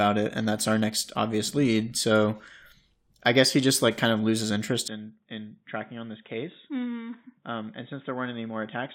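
At 4.88 s the input likely switched to a poorer device, cutting everything above 3.8 kHz; the speech turns abruptly dull, boxy and roughly 10 dB quieter.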